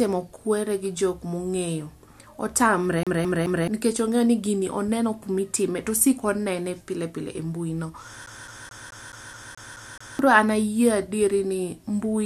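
Speech, with two episodes of a CD stuck on one turn. From 3.03 to 3.68 s the same 0.21 s fragment plays three times in a row. From 8.26 to 10.19 s the same 0.21 s loop repeats nine times. Each repeat is separated by a brief mute at the jump. The cause is a scratch or flaw that throws the laser back one track at the same point on every revolution. The identical loop length in both episodes gives the fast, even stutter of a skipping disc.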